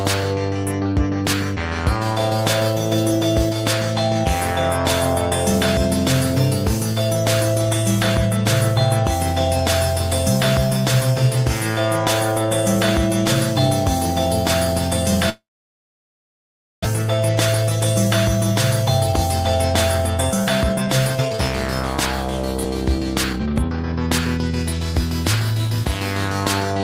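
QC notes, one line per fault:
15.29–16.87 s, long network dropout: audio stops arriving and what remains is mostly silence for about 1.4 s, likely from the stream's delay jumping by around half a second. Roughly 1.0 s of material never returns, so the sound resumes further on. On a spectrogram, a brief smeared tail gives way to an almost empty band before content reappears abruptly.
20.17–21.96 s and 22.64–24.75 s, jitter buffer speed-up: the receiver trims short pitch-period slices to drain excess buffered delay, running about 9% then 15% fast at unchanged pitch and removing roughly 0.15 s and 0.3 s. The sound feels hurried. The waveform shows compressed spacing, and spectrogram harmonics stay level while events crowd closer together.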